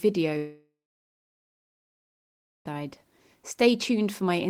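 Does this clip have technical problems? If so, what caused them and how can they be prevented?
Yes. A long network dropout, 0.37 to 2.67 s, likely from lost packets: a fading buzz, then about 1.9 s of silence. Unlike a brief glitch, the lost speech never returns. A steadier connection with more bandwidth headroom helps prevent this.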